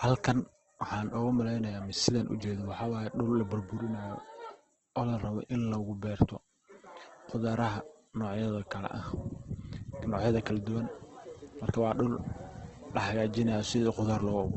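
Throughout, the speech sounds rough, grainy and noisy, with nothing above 8.2 kHz. The cause is likely heavy Opus compression, fitting a bitrate near 12 kbps.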